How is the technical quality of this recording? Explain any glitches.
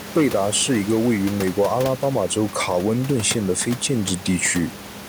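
Nothing stood out as a problem on listening; the only thing beneath the speech is a room noise about 15 dB below it, which comes from the space where the microphone was.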